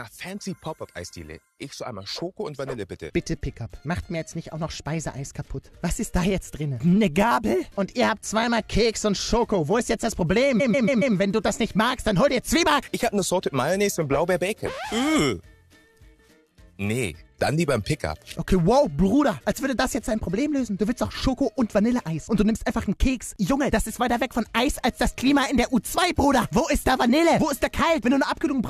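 A stutter of repeated frames runs from 10.59 to 11.15 s. A 139.3 ms block of compressed frames, which fits a run of about six frames, plays four extra times, so the same fragment loops and the audio grows about 557 ms longer.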